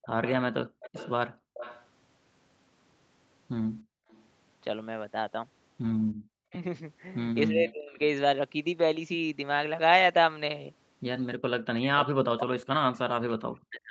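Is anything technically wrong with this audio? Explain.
Yes, this speech clip has several echo-canceller faults.

From 0.02 to 4.24 s there is an echo leak, likely from a loudspeaker echo the far-end canceller failed to remove. A delayed copy trails the speech by about 326 ms, roughly 20 dB down. A second leak runs from 12.05 s to the end, delayed about 356 ms and fainter, roughly 30 dB below the speech.

Speech suppressed in double talk occurs three times, likely because the canceller attenuated both talkers while they overlapped. Between 0.48 and 0.83 s the voice drops by up to around 40 dB. Between 6.5 and 8.0 s it dips by up to around 25 dB, for about half a second in total. From 11.79 s to the end it again falls by up to around 40 dB.

Background gated by the echo canceller appears from 1.33 to 6.22 s. The canceller clamped the microphone while the loudspeaker played, so the room sound drops by up to about 34 dB for about half a second in total.

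The audio also stops at 8 kHz, which fits the Opus codec running at a 40 kbps bitrate in the call path.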